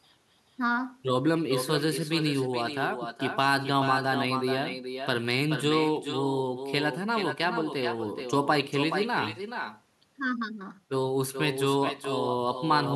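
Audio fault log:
Throughout, echo with no canceller: every phrase is trailed, roughly 400 ms later, by a thinner copy sitting about 7 dB below the original. The far end's loudspeaker feeds its microphone, and nothing cancels that return before it travels back.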